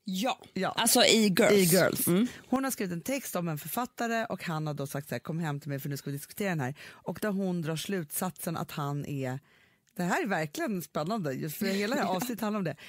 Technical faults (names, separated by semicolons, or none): sudden gain jump